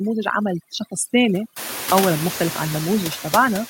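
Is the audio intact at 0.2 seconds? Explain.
No. Overdone noise removal runs through the whole clip, including 0.2 s. The noise reduction is set so strong that frequency bands near its noise estimate are pushed far down or off, and quiet parts of the speech go with them. The background drops and breaks up into twinkling specks. On a spectrogram this shows as a dark, emptied floor scattered with isolated bright dots, and holes punched into the fainter speech harmonics.

Noise suppressor artifacts are also present throughout, 0.2 s included. Each frame, bands taken for steady noise are lowered by about 7 dB, so the noise sinks between words and rises back under them. A spectrogram shows the noise floor pumping in step with the speech, and the waveform's quiet stretches breathe up and down rather than sitting flat.

The room noise at this point is still low, since it only rises by about 19 dB at around 1.5 s.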